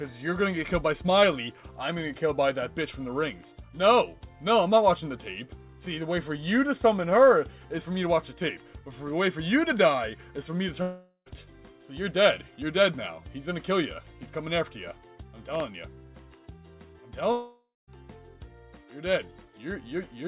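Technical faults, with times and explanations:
10.82–11.28 s and 17.32–17.89 s, long network dropout: the last sound stretches into a fading buzz, then 70 ms and 190 ms of near-silence. Audio resumes with 440 ms and 560 ms gone, likely from lost packets the receiver tried to conceal.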